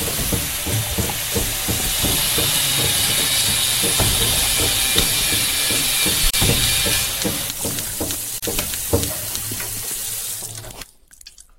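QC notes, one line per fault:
6.30–6.34 s and 8.38–8.43 s, gap at a join of encoded pieces: separately encoded sections were spliced with their start-up delay and last-frame padding left in, so the sound drops out for about 33 ms and 42 ms, then resumes where it stopped. On the waveform and spectrogram, each appears as a narrow empty band with smeared edges.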